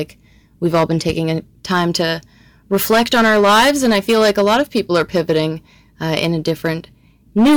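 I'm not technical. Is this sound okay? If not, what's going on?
No, it isn't. The whole clip has hard clipping. The speech was pushed much louder than the recording chain could handle, so every time the level peaks, the top of the waveform gets sliced off flat. That happens often here, on roughly 7 percent of the audio, so it isn't just the odd crackle. The flattened peaks add a harsh, buzzy fuzz to every loud syllable from start to finish.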